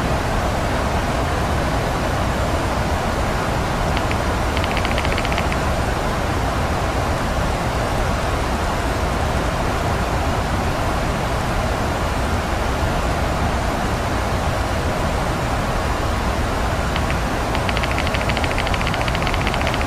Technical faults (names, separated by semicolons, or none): none